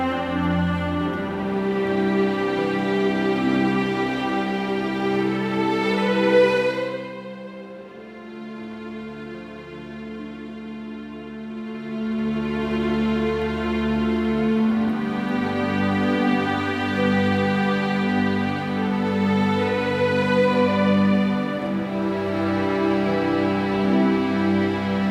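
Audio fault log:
11.44 to 12.76 s, zipper noise. The level moves about 15 dB in steps of about 1 dB, roughly ten per second, with no smoothing. Each step jolts the waveform and clicks. Together the clicks make a ticking that rides on the sound.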